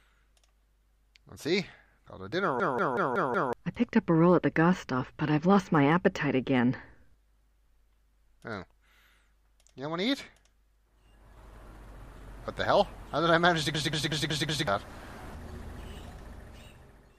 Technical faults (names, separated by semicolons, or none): system hang loop